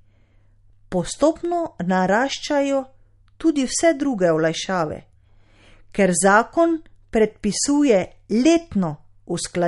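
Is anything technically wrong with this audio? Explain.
Yes. Throughout the speech, the audio likely went through MP3 compression at a low bitrate, consistent with about 48 kbps. Starved of bits, the encoder removed everything above 11.2 kHz and dropped weak frequency lines frame by frame, leaving dull, watery, swirling sibilants and smeared consonant attacks.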